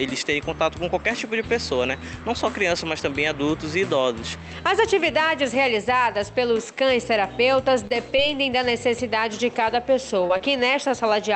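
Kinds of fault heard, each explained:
Short stall from a late packet: at 7.87 to 7.92 s a sound is held about 29 ms, then resumes where it left off, with nothing lost, unlike a dropped packet.
Short concealed packet loss: at 8.16 to 8.20 s about 20 ms never arrived and was patched with extrapolated sound, so audio is actually missing, not merely delayed.
Repeated packet loss (robotic sound): from 10.27 to 10.92 s four separate gaps, the longest 21 ms, are patched in close succession, giving a choppy, robotic texture rather than one isolated glitch.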